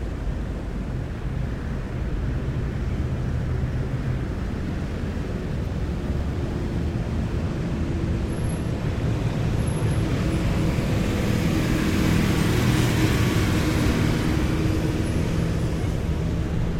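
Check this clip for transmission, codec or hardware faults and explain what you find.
One fault is present. Crude rate conversion runs from 0.00 to 7.43 s. It fits a 48 kHz to 44.1 kHz change made by simply dropping the nearest samples without filtering. The periodic error produces unrelated tones, an inharmonic gritty fizz roughly 40 dB below the sound that trails its louder, brighter parts.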